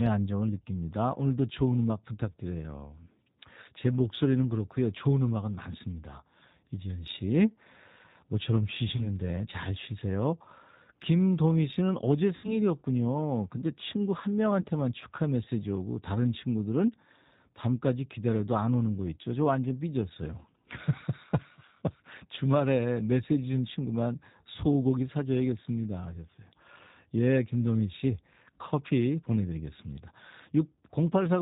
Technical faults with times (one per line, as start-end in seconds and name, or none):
0.00-31.41 G.729 codec
8.96-9.09 VoIP packet loss concealed by the speech codec
12.36-12.59 VoIP packet loss concealed by the speech codec
14.61-14.66 VoIP packet loss concealed by the speech codec